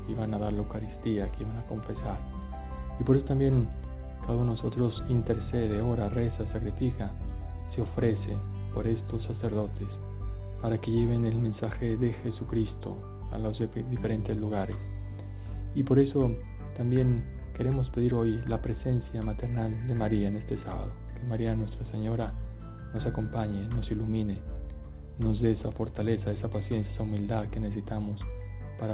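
No technical faults occur at any point, and the audio carries the narrow telephone band of a G.711 A-law call, with nothing above 4 kHz.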